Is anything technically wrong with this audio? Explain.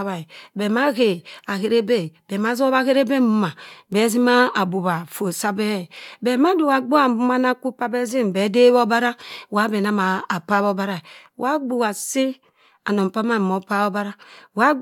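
No, nothing technically wrong can be heard here.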